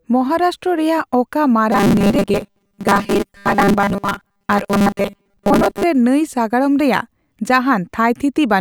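From 1.72 to 5.83 s the speech turns robotic from repeated short buffers. A rigid metallic buzz at 200 Hz replaces it, loosely tracking the words. Likely, starved playback loops a 5 ms slice through most of this stretch. Clear sound returns at "ᱨᱮ ᱱᱟᱹᱭ".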